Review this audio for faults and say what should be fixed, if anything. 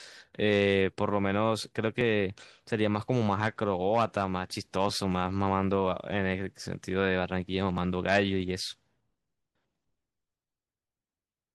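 About four regular clicks every 2.89 s, from 2.01 s to 10.67 s, are clock drift buffer slips. Two devices' clocks likely differ by around 0.1 percent, so roughly 150 samples drop or repeat at each slip. Each one shows as a thin vertical broadband line on a spectrogram and a sudden step in the waveform. Locking both devices to one shared clock, or resampling between them, would prevent it.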